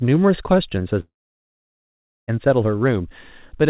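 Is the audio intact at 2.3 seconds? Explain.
No. A long network dropout runs from 1.0 to 2.31 s. A brief fading buzz gives way to about 1.2 s of silence, likely from lost packets.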